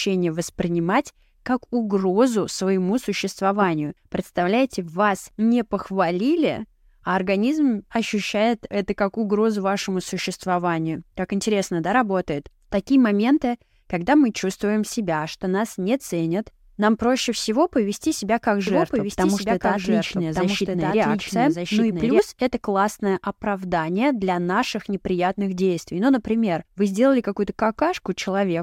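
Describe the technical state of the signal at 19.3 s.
At 19.3 s the speech carries a doubled audio track, running from 18.67 to 22.19 s: a second full-band copy trails about a second behind, roughly 5 dB quieter, with no reverberant tail, likely from a slower capture path recording the same signal again.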